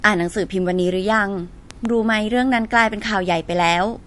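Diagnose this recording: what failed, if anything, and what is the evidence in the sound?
The codec stage failed. Throughout the speech there is no energy above 11.3 kHz, a hard treble ceiling set by the encoder. The compression damage is plainly audible as a watery, swirling texture. This is likely MP3 compression at a low bitrate, somewhere near 50 kbps. Starved of bits, the encoder cuts everything above a fixed frequency. It also drops weak spectral lines, which then flicker on and off between frames.

A loud pop lands between 1.71 and 1.87 s. It is two sharp pops in quick succession, peaking about 10 dB above the speech. The speech continues underneath without a break. That points to the analogue wiring stage, with a likely cause of a sudden voltage step from a plug, switch or static discharge. The downstream circuits shaped the pulse.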